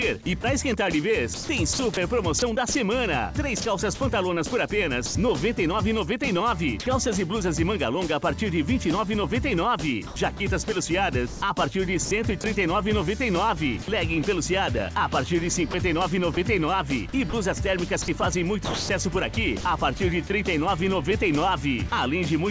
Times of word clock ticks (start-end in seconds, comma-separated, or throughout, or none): none